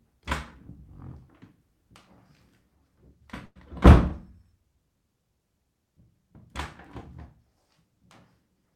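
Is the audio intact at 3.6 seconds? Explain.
Yes. Just before, a call audio freeze ran from 3.45 to 3.58 s, likely because late packets emptied the jitter buffer. About 100 ms of smeared, fading buzz, ending in roughly 40 ms of silence, filled the gap. It shows as a blurred tail then a blank column on a spectrogram, or a decaying then flat waveform. The sound resumes intact, only about 100 ms later.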